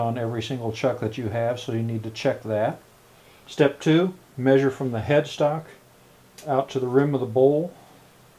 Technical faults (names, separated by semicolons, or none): none